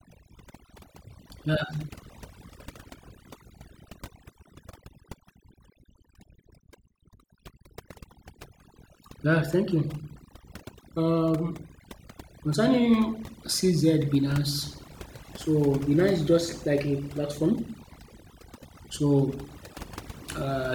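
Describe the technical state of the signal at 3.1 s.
At 3.1 s the signal is under overdone noise removal, which runs through the whole clip. The noise reducer is working far too aggressively: any frequency band sitting near its noise estimate is pushed deep down or switched off entirely, and the softer parts of the speech fall below that threshold and vanish with the noise. What remains is a lowered background scattered with twinkling specks.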